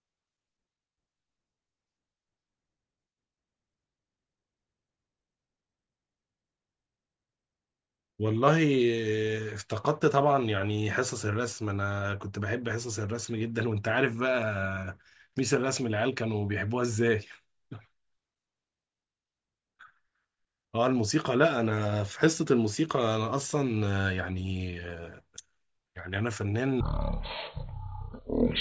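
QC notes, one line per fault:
26.81–28.61 s, wrong sample rate: the speech suddenly drops to a deep, dragging crawl, running at 0.363 times normal speed and about 17.6 semitones lower. Speed and pitch fall together, which fits 44.1 kHz material played back at 16 kHz with no conversion. On a spectrogram, harmonics and formants slide down to roughly a third of their usual height and syllables smear wider in time. On the waveform, each cycle and each envelope stretches almost threefold.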